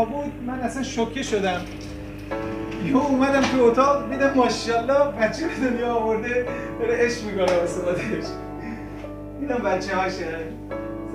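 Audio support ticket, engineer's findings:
Mains hum, continuous from start to end. Steady low tone at 50 Hz with a few low harmonics, fairly prominent, not far below the programme level. Probable ground loop or nearby transformer coupling the power line into the signal path. Spectrogram: unbroken horizontal line at 50 Hz, fainter lines at its multiples. Waveform: constant low-frequency ripple riding under the audio.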